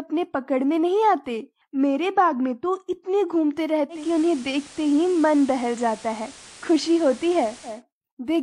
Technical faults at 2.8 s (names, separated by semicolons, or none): none